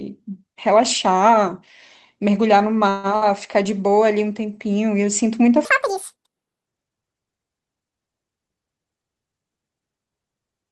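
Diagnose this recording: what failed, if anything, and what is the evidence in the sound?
At 2.89 to 3.07 s the speech stalls into a fading buzz or hiss for about 140 ms, then resumes intact: a call audio freeze, likely packets delayed and the jitter buffer running dry.

At 3.16 to 3.24 s a short held buzz or fading hiss replaces the speech, and about 60 ms is lost: a burst of packet loss on the network, concealed by the receiver.

From 5.65 to 6.65 s the speech turns high and hurried, about ten semitones up at 1.98 times speed: a section at the wrong speed, likely a playback or editing clock mismatch.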